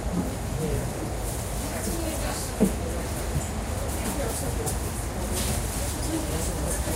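Nothing technical goes wrong anywhere in this recording; the sound simply runs its course without a single hiccup to point at.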